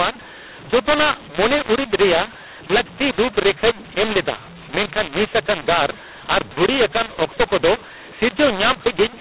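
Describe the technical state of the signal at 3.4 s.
At 3.4 s the speech carries a mu-law and A-law mixed up fault, present for the whole clip rather than at this moment alone. The G.711 telephone stream was coded with mu-law but decoded as A-law, so each 8-bit code maps to the wrong level: some samples come out too loud, others too soft, and the quietest are pushed well above silence. The result is harsh, gritty distortion on the speech, with pauses filled by noise, all within the 4 kHz telephone band.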